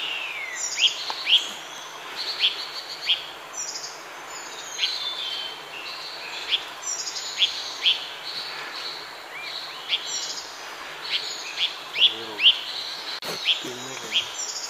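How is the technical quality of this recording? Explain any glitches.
No glitches or technical faults can be heard here.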